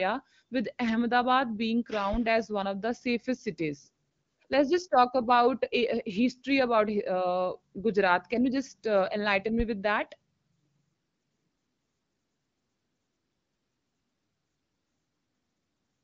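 A speech recording carried over an AMR wideband (HD Voice) codec, with nothing above about 7.4 kHz. At 9.60 s, just after "you just uh enlighten", a deep, low thump hits and dies away with a 38 ms decay, lasting until 9.77 s. This is a phantom power thump: switching the supply on or off while the input was live sent a sudden voltage step through the coupling capacitors into the signal.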